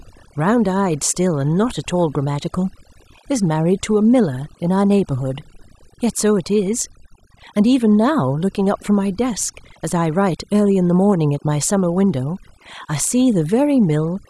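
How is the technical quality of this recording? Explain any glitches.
The recording has one fault that runs through all of it. Overdone noise removal, throughout: an aggressive suppressor cuts frequency bands it mistakes for noise, taking quiet parts of the voice with them and leaving near-silent backgrounds with twinkling specks.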